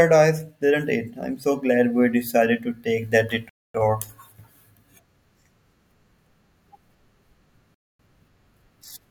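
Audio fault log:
3.49–3.74 s and 7.74–7.99 s, gap between chunks: 250 ms silences, the first after "decided to take that", inserted at joins between 4 s chunks; no speech lost, only interrupted.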